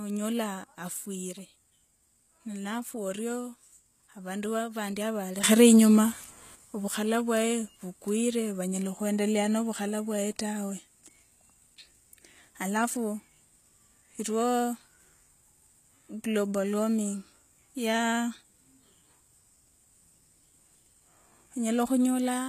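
A speech clip with HE-AAC compression damage throughout. The treble sounds rebuilt rather than recorded. S sounds are gritty and metallic. Nothing reaches above 14.9 kHz. This is likely a very low bitrate, around 20 kbps, with copied-up high bands.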